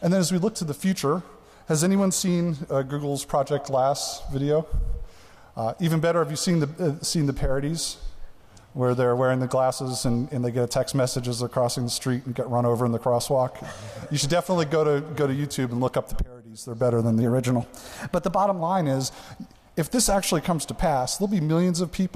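From 17.22 to 18.60 s, a wrong sample rate makes the sound run about 1.09 times fast and 1.5 semitones high. This fits 44.1 kHz audio played at 48 kHz.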